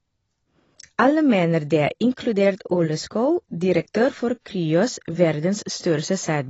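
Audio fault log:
throughout AAC compression: the speech is dull and smeared, with a warbling, fizzy edge on sibilants. A spectrogram shows a flat ceiling with nothing above 7.9 kHz. This is likely low-bitrate AAC-LC encoding, which fits roughly 24 kbps.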